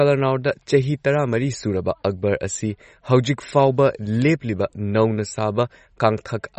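Throughout the speech, MP3 compression damage is plainly audible. Nothing remains above 8.2 kHz, and sparse bits leave a watery swirl, likely from a low bitrate near 32 kbps.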